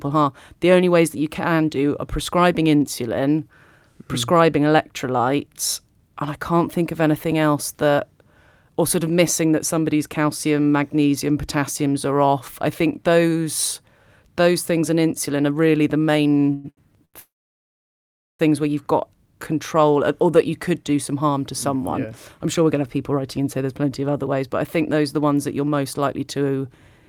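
Just after "insulin are really the", at 16.53 to 16.66 s, the speech hangs as a brief fading buzz or hiss of about 0.11 s before carrying on with nothing lost. This is a call audio freeze, likely from packets held up in transit so the jitter buffer ran empty.

Two short stalls from a late packet follow, at 16.70 to 16.79 s and at 17.05 to 17.16 s. The sound is held too long, by 70 ms and then 85 ms, with a slight buzz or dip. In each case a packet arrived late, the receiver stretched the last sound, and it resumed where it left off.

From 17.20 to 18.41 s a second freeze opens a gap of about 1.2 s. A short fading tail gives way to roughly 1.12 s of silence before "where you've got control" resumes intact. The long wait, likely for held-up packets, pushed the delay up by the full gap.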